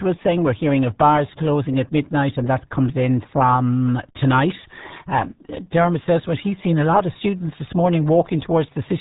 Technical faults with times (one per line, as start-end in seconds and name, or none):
0.00-9.01 RealAudio 14.4 codec